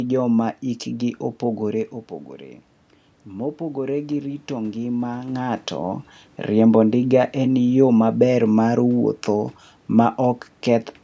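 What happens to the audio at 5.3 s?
At 5.3 s the automatic gain is rising, from 3.26 to 6.08 s. The input fell by about 9 dB, and the gain control raises its boost gradually by about 5 dB, so speech and room noise swell together.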